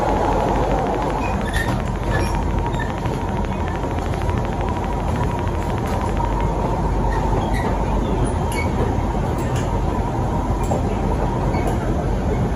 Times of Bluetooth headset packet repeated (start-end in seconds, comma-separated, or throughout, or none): none